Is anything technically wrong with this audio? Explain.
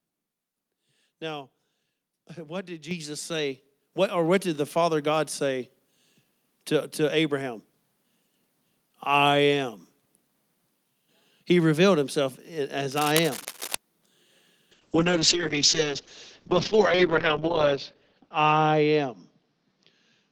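Yes, a few things. At 2.91 s, just after "what did", and again at 3.94 s, the microphone volume steps up by about 8 dB then about 4 dB, so voice and background jump louder together.

From 12.9 to 13.7 s, right after "revealed himself", there's cable scratch noise, a fairly loud rustling burst, likely from a worn cable or connector being moved.

From 14.72 s to the end, there's a call bitrate drop from 48 to 7 kbps. Bandwidth shrinks from 20 kHz to 8 kHz, and the speech turns muffled and rough, bottoming out for nearly 3 s.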